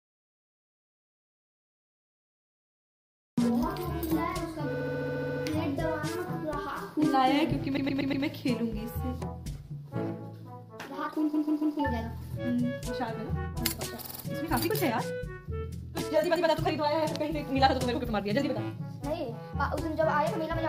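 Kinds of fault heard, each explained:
audio dropout to silence: The clip opens in dead silence, with no room tone at all, and sound cuts in abruptly mid-flow at 3.38 s. The input was likely lost while recording continued, writing silence, so that opening material is gone.
repeated frames: A short block of compressed audio plays again one or more times in a row, heard as a stutter. Blocks of about 70, 109, 139, 36 and 109 ms repeat at 4.72, 7.76, 11.33, 14.03 and 16.35 s, adding 0.7, 0.48, 0.42, 0.19 and 0.12 s.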